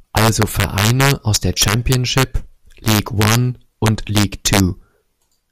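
Throughout the speech, integer overflow pushes peaks about 4 dB past the largest integer, and a small fraction of samples, around half a percent, wrap to the opposite sign instead of being limited. Loud syllables crack violently. The waveform shows sudden vertical jumps to the opposite sign, and the spectrogram shows broadband vertical streaks.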